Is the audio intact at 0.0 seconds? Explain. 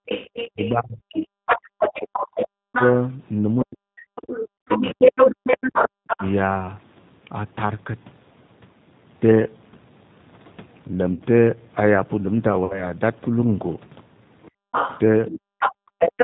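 No. From 0.0 to 0.06 s the echo canceller, reacting to loudspeaker playback, clamped the microphone gain hard, so the background is gated by the echo canceller. The room sound drops by about 38 dB, leaving a brief near-silent hole before the level returns.

The whole clip, this opening included, also passed through the G.729 codec at 8 kbit/s. It rebuilds speech from a vocal-tract filter, a pitch predictor and a few pulses per 10 ms frame, so the audio has a plainly audible rough, synthetic grain.

Right where the gating releases, at 0.06 s, a second voice begins coming through and continues until 6.32 s, at roughly the same level as the main speech. This is other-side voice leaking through, most likely loudspeaker playback that the echo canceller failed to remove.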